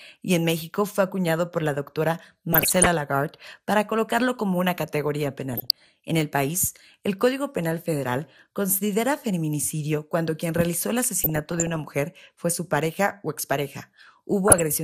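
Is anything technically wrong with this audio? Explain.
Yes. The whole speech clip carries a dull, gurgly, granular quality that points to MP2 compression, likely at a low rate around 80 kbps. MPEG Layer II splits the signal into 32 sub-bands and hands out bits per band. Starved of bits, the top bands switch off or flicker in and out, and what remains gets coarsely quantised. That's why the speech sounds muffled from start to finish, with the codec damage plainly audible.

On top of that there are four bursts of DAB burbling. The first runs from 2.53 to 2.86 s, right after "acuñado por la doctora". The second is 5.53 to 5.91 s, after "colocarlo como una categoría". The longest, 11.22 to 11.81 s, sits between "cuando quien realizó el" and "mujer fue su pareja". The last is a short one at 14.48 to 14.62 s. Each puts short blips of noise over the speech. This is what weak reception does: a bit error rate of roughly under one percent slips past error correction into the MP2 data, and corrupted samples put short noise blips in single sub-bands, while corrupted scale factors make sub-bands jump in level for up to a frame.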